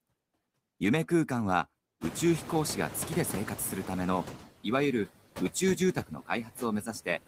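Noise suppressor artifacts run through the whole speech clip. Background noise between phrases is pulled down by about 17 dB. On a spectrogram, speckled, flickering residue appears between syllables.

From 2.01 to 4.38 s, the noise suppressor is catching up. The room noise jumps by about 24 dB at around 2 s, and the suppressor's estimate takes 2.37 s to adapt, removing only about 8 dB at first. A brighter noise floor is visible there, fading as the reduction deepens.

Speech is cut by the noise suppressor at 5.95 to 6.62 s, with drops of up to about 16 dB over roughly a third of a second, and again at 6.82 to 7.07 s, up to about 11 dB over roughly a tenth. The affected speech sounds swallowed, and the waveform shows sudden dips in the speech envelope.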